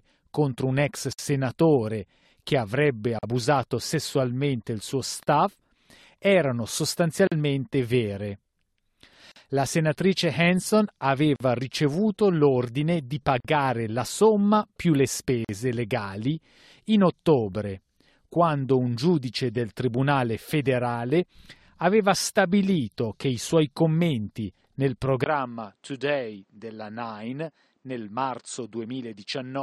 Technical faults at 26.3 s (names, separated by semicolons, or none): input switched to a poorer device